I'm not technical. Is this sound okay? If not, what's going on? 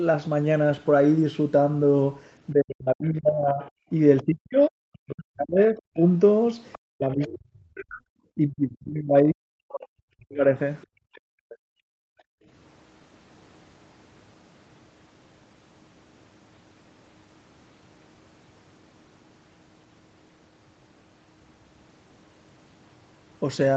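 No. Speech suppressed in double talk, from 2.52 to 6.02 s and again from 6.9 to 10.44 s: the talker's voice sinks to almost nothing for about three seconds each time. Two people were likely speaking at once, and the call's echo cancelling couldn't tell the talker apart from the loudspeaker, so it turned everything down.

The other side's voice leaking through, at 4.17 to 4.23 s, 6.72 to 6.79 s and 10.82 to 11.56 s: a faint second voice slips in, briefly at first and then for most of a second. This is likely the far end playing from the talker's loudspeaker and not being fully removed from the microphone.

Background gated by the echo canceller, from 10.87 to 12.47 s: the room sound drops away almost completely for about a second and a half, then returns. While the loudspeaker was playing, the echo canceller clamped the microphone down hard and released it afterwards.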